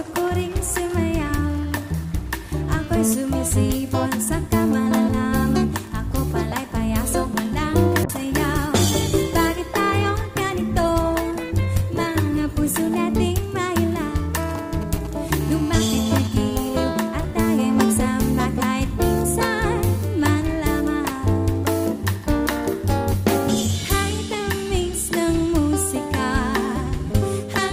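A call bitrate drop runs from 8.04 to 13.01 s. The call's bandwidth estimate collapsed, and the encoder switched to far coarser coding for about 4.9 s. The coarseness and lost treble suggest a fall from around 128 kbps to roughly 22 kbps, giving rough, muffled, watery sound until the rate recovers.

GSM signalling bursts follow from 14.35 to 15.31 s. A nearby 2G handset sent short groups of radio bursts while signalling, and the audio circuitry rectified them into a galloping dit-dit-dit of brief 217 Hz buzzes, roughly 15 dB below the signal.

GSM phone buzz then sounds from 15.41 to 16.27 s. The same kind of handset, now in a call, transmits in bursts 217 times a second, and rectification of those pulses produces a hard, raspy, harmonic-rich buzz at about 16 dB below the signal, unrelated to the audio itself.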